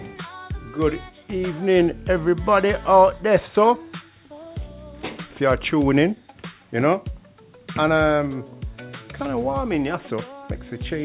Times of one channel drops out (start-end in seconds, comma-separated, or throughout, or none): none